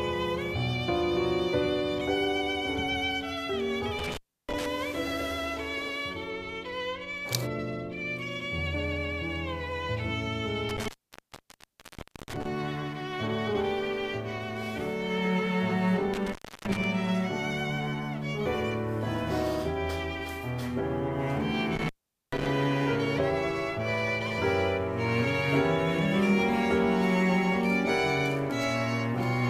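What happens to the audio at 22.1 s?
An intermittent contact fault runs from 21.76 to 22.46 s: a loose connection opens for about 434 ms, cutting the audio out, with crackle at each edge and faint hiss in the gap.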